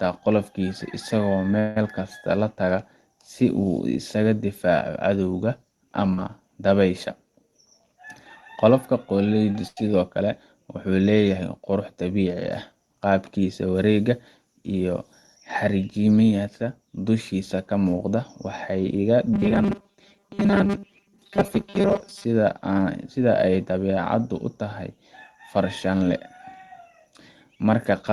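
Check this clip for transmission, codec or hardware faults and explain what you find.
Yes, there's a fair bit going on: six separate network-type glitches across the clip, all riding on an Opus call path whose top end seems to stop around 12 kHz.

At 1.59 to 1.77 s there's a call audio freeze. The sound hangs and trails off as a fading buzz or hiss for about 168 ms, then picks up exactly where it left off, so nothing's lost but that stretch is pushed later. The likely cause is packets held up in transit, leaving the jitter buffer empty until they showed up.

Around 6.13 to 6.19 s you get short concealed packet loss. Roughly 50 ms of audio never made it to the decoder, and the receiver patched the hole for about 44 ms by extending the previous sound before blending back in. It comes across as a quick smear or wobble.

At 9.52 to 9.63 s there's a short stall from a late packet. A packet wasn't ready on time, so the receiver stretched the last sound for about 30 ms and then carried on from the same spot. 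Nothing is missing, but one sound lingers a touch too long, with a faint buzz or dip, and the timing slips by that 30 ms.

Straight after that, at 9.68 to 9.78 s, comes a burst of packet loss. About 90 ms in a row went missing. The receiver carried the last sound forward for roughly 88 ms, fading it as it went, so you hear a held buzz or a dying hiss, and then the audio jumps ahead with that chunk absent.

From 19.34 to 22.25 s the sound turns robotic from repeated short buffers. Most of that stretch is the same tiny slice looped over and over, which stamps a fixed 200 Hz buzz onto everything. That fits a 5 ms buffer being replayed, likely because fresh audio was arriving too rarely. It sounds rigid and metallic, though it still roughly tracks the original.

Finally, 25.94 to 28.10 s shows a jitter buffer speed-up. The buffer was holding more audio than it wanted, so the receiver trimmed out lots of tiny pitch-period-sized pieces, about a tenth of a second in total, to cut the delay. 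The result plays about 5% fast at unchanged pitch, so that closing stretch feels slightly hurried.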